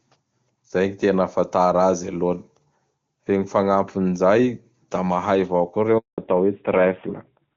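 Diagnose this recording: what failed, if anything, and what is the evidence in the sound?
At 5.98 s the speech dies abruptly and stays silent for 200 ms, resuming at 6.18 s. This is a handover gap at the network stage: the call was switched to a different link, no speech frames arrived during the changeover, and that stretch of audio is lost.

From 6.18 s to the end, the speech turns duller and rougher, with nothing above 4 kHz, in contrast to the clear, wideband HD Voice sound before the gap. This is a fallback to narrowband at the codec stage: after the handover, the call dropped from AMR-WB to AMR-NB, and the added rasp fits a low mode of about 7.4 kbit/s.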